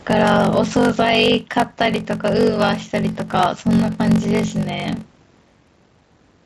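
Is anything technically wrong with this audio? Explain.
Yes. Two faults run through the whole clip of speech.

Gain pumping is present throughout. The gain swings by roughly 5 dB. The likely cause is gain set far too high, with a fast limiter clamping every peak. Loud and soft parts sit squashed together.

A block size mismatch (padded) also runs throughout. One stage delivers shorter blocks than the next reads, and zeros fill each remainder, which fits a 1024-sample read block. Those tiny gaps make a 46.9 Hz buzz. The speech runs slow, at 0.861 times normal speed, with its timbre unchanged.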